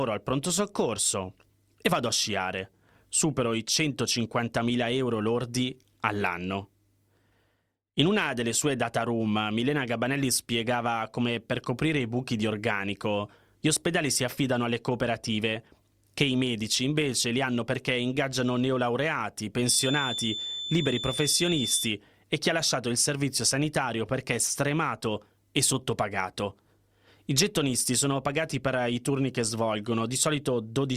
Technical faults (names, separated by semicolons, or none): feedback whistle